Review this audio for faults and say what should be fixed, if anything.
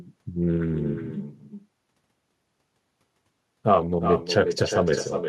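Every phrase of the speech is followed, throughout the clip, by a quieter, thinner copy about 6 dB down and roughly 0.4 s behind. This is echo with no canceller: the far end's loudspeaker output reaches its microphone and returns over the network uncancelled. Enabling acoustic echo cancellation at the far end, or having that participant use a headset, would stop the return path.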